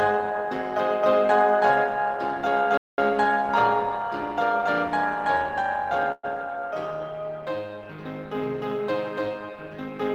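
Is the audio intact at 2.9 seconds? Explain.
No. The sound drops to silence from 2.77 to 2.98 s, a gap of about 205 ms, then resumes: a playback stall, likely from the player running short of data or its thread being blocked. Around that moment, and throughout, a metallic buzz near 200 Hz pulses the level by about 6 dB. This is overlap-add ripple from frames rejoined with an overlap that doesn't sum to constant gain.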